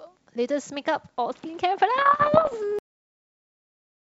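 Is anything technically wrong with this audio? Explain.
Yes, there are two faults in this speech clip.

From 1.98 to 2.55 s there are scattered pops and short, rough, gritty bursts, with the level briefly jumping or sagging around each one. These are bit errors on an ADPCM link, with roughly one bit in a hundred flipped. Because ADPCM codes each sample as a change from a prediction, a wrong bit also knocks the decoder's step size and predictor off track, so each error rings on for a few milliseconds instead of being a single click.

At 2.79 s the sound stops mid-utterance and drops straight to digital silence, with no natural decay, and stays silent to the end. This is a cut-off end: the final buffers were never written or played out, so the recording is truncated instead of fading out. The wideband telephone character of the G.722 coding is audible throughout, and the burst errors fit that kind of ADPCM link.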